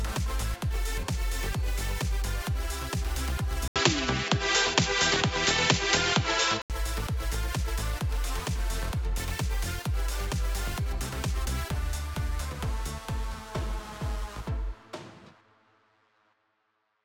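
At 3.68 s there's an 80 ms gap, then until 6.70 s the sound goes dull and boxy, with nothing above 7.6 kHz, a level shift of roughly 5 dB and a new noise floor. That's likely the input switched to a poorer device before switching back.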